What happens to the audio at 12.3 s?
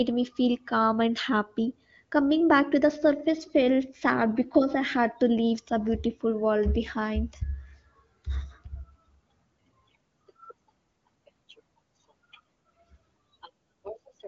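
Nothing goes wrong at 12.3 s: the speech carries on intact through the AMR wideband (HD Voice) codec path, with content reaching up to about 7.3 kHz and no audible break or distortion at that point.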